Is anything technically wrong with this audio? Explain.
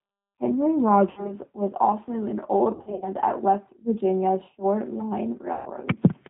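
Yes, there are two problems. The whole recording has been through the G.729 codec, and the damage is plainly audible. The codec rebuilds speech from a vocal tract filter, a pitch predictor and a handful of pulses per 10 ms frame, and that fits an 8 kbit/s G.729 stream. Everything above 4 kHz is gone, so the speech sounds muffled, and the coarse pulse excitation leaves it slightly rough and synthetic.

There are also three spots of VoIP packet loss concealed by the speech codec. The first runs from about 1.1 to 1.35 s, just before "was also an", and it sounds like about 60 ms of missing audio. The second, right after "was also an", runs from about 2.72 to 3.08 s. There the dropouts are scattered across roughly 300 ms, with the longest gap around 60 ms. The third runs from 5.53 to 5.70 s, with about 130 ms missing. In each gap the decoder keeps replaying its last pitch and filter at falling gain, so the sound smears into a buzzy tone or a coloured noise that fades. 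The speech also stays weak for a moment after packets resume.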